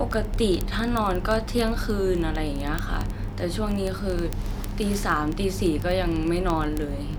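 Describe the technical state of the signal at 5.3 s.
Word clock ticks run through 5.3 s, part of a span from 0.11 to 7.18 s. The receiver's clock drifts against the sender's by around 0.1 percent, so roughly every 20 ms a single sample is dropped or repeated, producing sharp, steady ticks.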